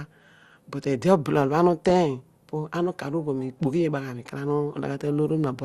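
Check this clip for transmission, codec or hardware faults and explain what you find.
Two faults are audible: a constant coded-speech dullness and a brief burst of burbling.

MP2 compression, throughout: the speech sounds dull and gurgly with a granular edge, likely from MPEG Layer II coding that fits about 80 kbps, where upper sub-bands flicker off and the rest are quantised coarsely. Unlike transform codecs' swirly pre-echo, the damage is band-wise and grainy.

DAB burbling, from 1.8 to 1.91 s: a short burst of burbling runs over the speech. Bit errors, at a rate of a few tenths of a percent, slipped past error correction and corrupted samples across what sounds like eight frames, putting short blips of noise into single sub-bands. Unlike steady compression grain, it is sudden and localised.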